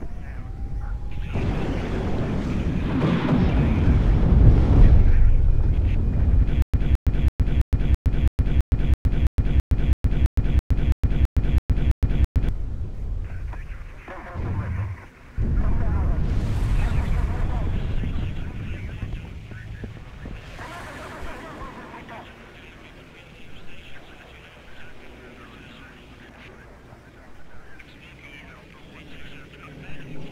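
From 6.62 to 12.49 s there's a stutter with silent gaps: a 217 ms fragment repeats 18 times, each followed by about 114 ms of dead silence, a steady 331 ms cycle. That's likely a stalled player replaying its last chunk, and whatever should have played there is gone.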